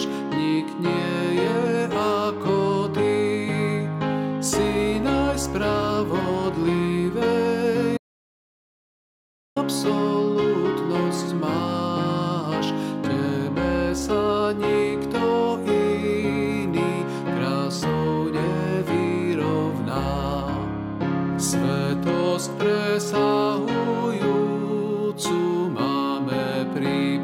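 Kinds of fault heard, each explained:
Audio dropout to silence: the sound cuts off at 7.97 s into silence for about 1.6 s, with no room tone, likely from a lost input link.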